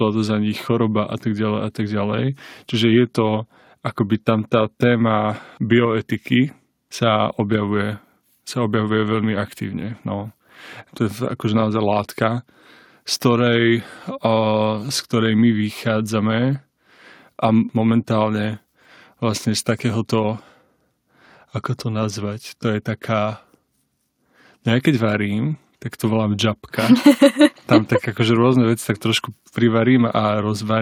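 Nothing goes wrong anywhere in this stretch of speech, so there's no technical fault to point to at any moment.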